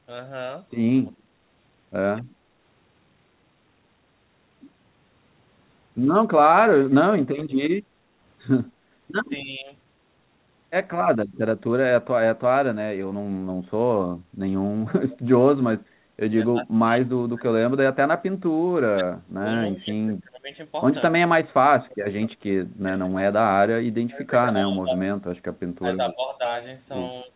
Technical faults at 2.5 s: background gated by the echo canceller

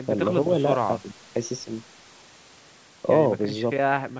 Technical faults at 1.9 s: none

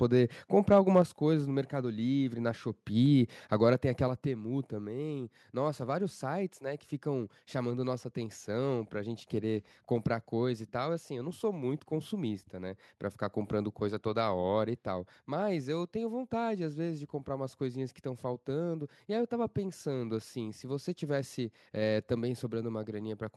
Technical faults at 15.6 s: none

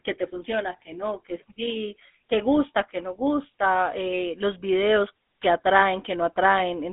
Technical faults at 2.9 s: GSM full-rate codec

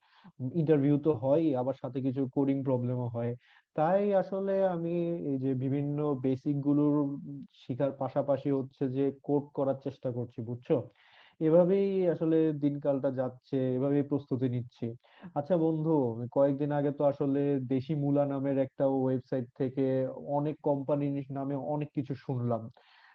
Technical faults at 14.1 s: none

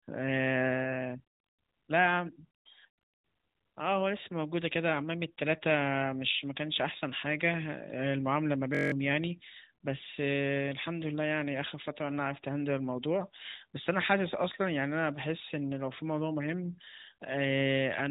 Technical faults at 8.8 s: system hang loop

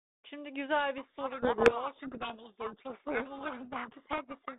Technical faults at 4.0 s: codec payload misread

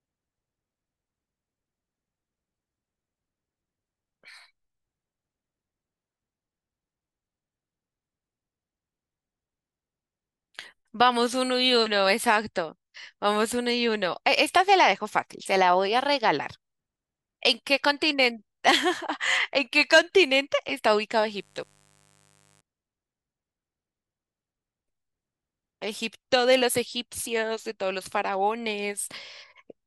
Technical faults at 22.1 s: mains buzz

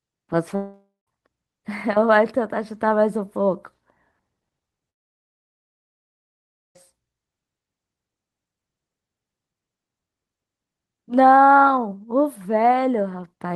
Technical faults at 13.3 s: none

